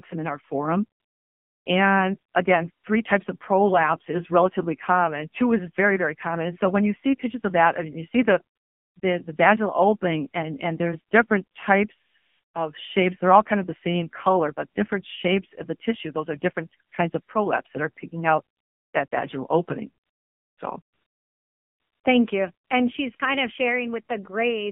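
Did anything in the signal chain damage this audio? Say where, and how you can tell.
Yes. The AMR narrowband mobile codec, a codec-stage fault, runs through the whole clip. Everything above 4 kHz is missing and the audible band sits at about 150 Hz to 3.4 kHz, which fits 8 kHz sampling. The speech has a buzzy, synthetic edge because a small vocal-tract model excited by sparse pulses rebuilds each 20 ms frame. The coarseness of that rebuild points to a low AMR-NB mode, around 7.4 kbps.

AMR comfort noise, from the call-processing stage, appears 14 times between 1.0 s and 22.7 s, in gaps lasting 20 ms to 1.22 s. The first runs from 1.0 to 1.66 s, between "some in our forum" and "and again three types". The longest runs from 20.82 to 22.04 s. In each gap the phone stopped sending speech frames, and the receiver filled the pause with smooth, steady synthetic noise that switches abruptly in and out.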